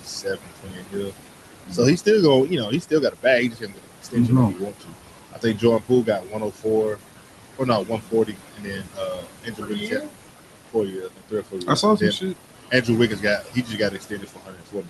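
Throughout, the background noise ducks away in the gaps and swells back under each phrase. These are noise suppressor artifacts. A frame-by-frame suppressor is pulling down the bands it judges to be steady noise by about 17 dB. The room noise, sitting only about 11 dB under the speech, gives it a lot to chase, so its gain keeps pumping as speech starts and stops.

Speech cut by the noise suppressor follows the same pattern at 0.00–1.13 s, 1.66–2.07 s, 2.47–4.16 s (ending just before "like he"), 4.53–4.94 s (just after "like he"), 5.33–7.0 s, 7.59–10.11 s, 10.73–12.36 s and 12.71 s to the end. Quiet consonants, word tails and soft passages fade or sound swallowed, dropping by about 15 to 19 dB. The suppressor mistook these low-level speech parts for noise and attenuated them with the background, for roughly 0.2 to 1.5 s within a span.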